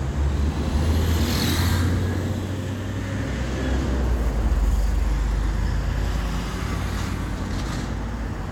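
No technical faults can be heard anywhere in this recording of sounds, and the signal stays intact throughout.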